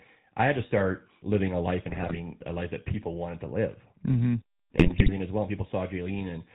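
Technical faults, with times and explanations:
Throughout: GSM full-rate codec, clearly audible; excitation built from regular pulses gives buzzy, gravelly speech, spectrogram shows nothing above 4 kHz, consistent with 13 kbps coding.
1.9–2.18 s and 4.76–5.12 s: GSM bit errors, before "a life that people" and "as well"; corrupted filter, pitch and gain values cause squawks and pops, seen as level spikes and smeared spectral bands.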